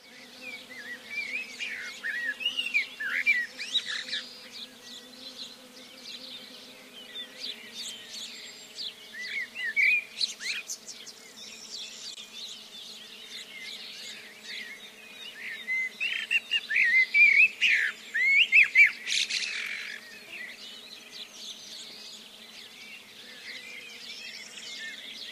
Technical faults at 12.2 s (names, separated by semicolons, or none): gap at a join of encoded pieces